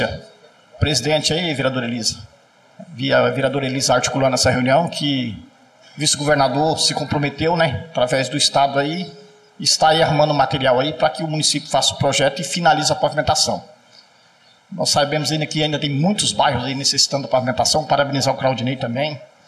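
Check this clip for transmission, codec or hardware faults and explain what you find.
One fault runs through the whole clip.

Channel delay (comb filtering), present throughout: one channel arrives roughly 1.5 ms behind the other, and summing them to mono cancels shared content at evenly spaced frequencies, the first near 400 Hz. The result sounds hollow and phasey, with fixed spectral notches.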